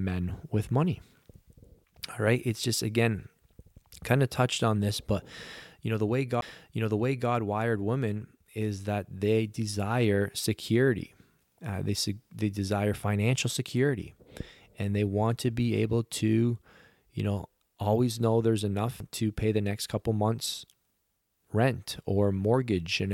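A tick and an abrupt jump in the speech come at 6.41 s, between "touched on this but" and "wired women is that", and again at 19.00 s, after "know always know there's" and before "to pay the next". Each is a CD skip: the laser lost its track and resumed elsewhere on the spiral after a very brief mute.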